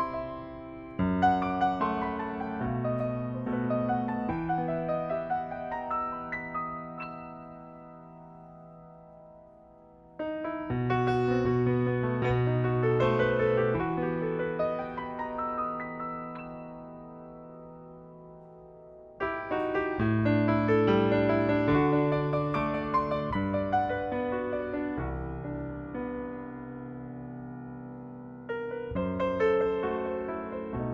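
Listening through the whole recording, nothing stood out as a technical problem at any point.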